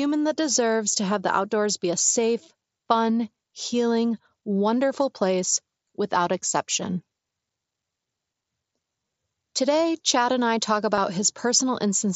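At 5.55 s, between "safe fun healing wonderful" and "without exception", concealed Bluetooth headset packet loss drops about 7.5 ms of audio. The phone patches the gap with a copy of the waveform just before it, so it is barely audible. At 8.93 s, about 15 ms is lost, and a short buzzy hold is audible. After "and I talk", at 10.95 to 10.98 s, about 22.5 ms goes, which fits three lost packets. A steady tone sits at full level, then warbles as real audio returns over the wideband mSBC link.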